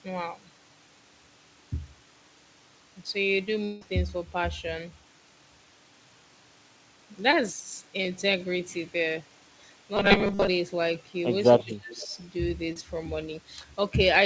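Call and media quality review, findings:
Long network dropout, 3.64 to 3.83 s. About 180 ms of speech lost; receiver extends the last sound as a fading buzz across nearly the whole gap, no true silence, then speech resumes with that stretch missing. Likely cause: network path dropping consecutive packets, jitter buffer concealing until audio returns.

Short concealed packet loss, 7.31 to 7.42 s and 12.73 to 12.77 s. Brief smear or wobble, roughly 20 ms of audio lost each time. Decoder concealment continues the prior sound for about 12 ms and 22 ms, then crossfades back into real audio.

Robotic sound from repeated short buffers, 9.97 to 10.47 s. Rigid metallic buzz at 200 Hz over speech still loosely tracking the syllables; most of the span is repeated material. Likely cause: playout starving and re-playing a tiny block, consistent with a 5 ms buffer.

Echo leak, 11.57 to 11.74 s and 12.03 to 12.07 s. 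Faint delayed copy of the speech, about 282 ms and 284 ms late, roughly 20 dB and 30 dB below the talker. Far end likely on loudspeaker, echo canceller leaving residual.

Speech suppressed in double talk, 11.63 to 12.08 s. Overlapping talk; the talker dips and breaks up for about a third of a second in total, deepest drop about 30 dB. Likely cause: echo canceller unable to separate near talker from echo, attenuating both. Band limit at 7 kHz on the call path is consistent with G.722.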